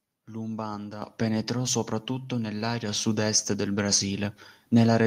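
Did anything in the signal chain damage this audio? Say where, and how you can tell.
Yes. At about 1.02 s the speech and the background noise floor jump up together by about 7 dB in a single step, which marks a microphone volume stepped up fault in call processing. The call software judged the input too quiet and raised the device's input volume at once rather than riding it gradually. That the noise floor rises with the speech, abruptly, rules out a talker moving closer or a smooth automatic gain ramp.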